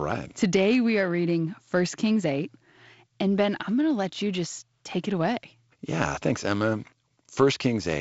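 The speech carries no technical faults, arriving through G.722 wideband telephone coding with content reaching up to about 7.7 kHz and nothing above, plus a light hiss in the upper band and slightly grainier low-band detail that fits the codec's 48 kbit/s mode.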